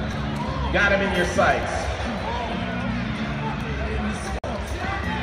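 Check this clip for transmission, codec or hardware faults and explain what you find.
Two kinds of fault are present: two skips where a short stretch of audio is missing, and one brief silence at a join of encoded pieces.

At 1.63 s and 3.61 s the sound jumps forward abruptly, with roughly 20 ms gone each time and the two sides butted together with nothing in between. The pattern is likely audio missing between chunks: the capture or processing stage works in blocks, here about 2 s long, and drops a sliver at each handover. The tell is that nothing is inserted; material simply vanishes at a regular interval.

From 4.39 to 4.44 s a silence of about 49 ms opens in otherwise continuous sound, with softened edges, and the sound then resumes where it stopped. This is a gap at a join of encoded pieces, where separately encoded segments were concatenated with each run's leading delay and final-frame padding left in. 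Unlike the chunk skips, no audio is lost here. Instead, silence is added, so the sound pauses rather than jumping ahead.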